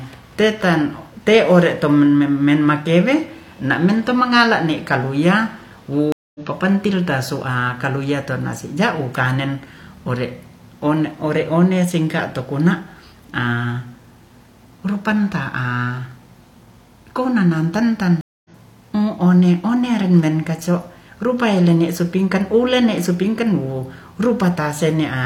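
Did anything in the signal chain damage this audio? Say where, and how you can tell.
Yes. Two stream reconnects at the network stage. Speech drops out at 6.12–6.40 s and 18.21–18.50 s. The connection broke, and a fresh decoder resumed roughly 150 ms further on.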